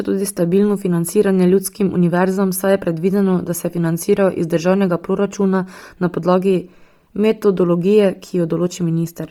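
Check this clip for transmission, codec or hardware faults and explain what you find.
One codec fault runs through the whole speech clip.

Bluetooth LC3 compression, from start to end: a transform codec is likely discarding upper-band detail and filling it with synthetic noise, which fits 10 ms frames at around 32 kbps. Damage is heavy, giving the speech a breathy, grainy edge, with nothing above 20.2 kHz.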